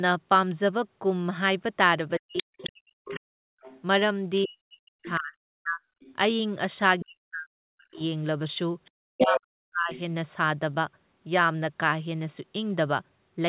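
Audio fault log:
2.18–3.82 s, other side's voice leaking through: a second voice sits about 10 dB under the talker, likely echo the canceller missed, showing as overlapping harmonic stripes on the spectrogram.
2.19–5.81 s, speech suppressed in double talk: likely while both sides talk, the talker's level plunges by around 40 dB, leaving notches in the waveform envelope and gaps across the spectrogram.
6.00–6.16 s, other side's voice leaking through: a faint burst of the far voice, about 30 dB down, is barely visible as a weak smear.
7.03–8.00 s, speech suppressed in double talk: the near talker is pulled down by around 40 dB during overlap, likely the canceller ducking both voices, so the waveform shows a sudden hollow and the spectrogram goes blank.
7.94–9.99 s, other side's voice leaking through: the far voice returns strongly, only about 5 dB under the talker, and its own formant pattern clearly overlays the near speech on the spectrogram.
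9.13–9.93 s, speech suppressed in double talk: the talker again dips, dropping by around 40 dB, which shows as notches in the envelope and vertical gaps within the band below 4 kHz that the call codec passes.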